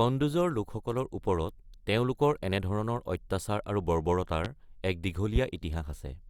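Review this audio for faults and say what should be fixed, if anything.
Two loud pops, at 4.45–4.48 s and 5.36–5.39 s, each a single sharp burst about 15 dB above the speech, which continues unbroken underneath. Unlike a dropout, nothing is missing. The cause is likely a voltage pulse from static, a switch or a connector. Secure cables, ground equipment and avoid switching during recording.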